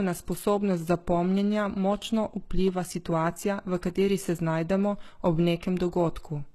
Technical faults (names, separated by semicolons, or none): HE-AAC compression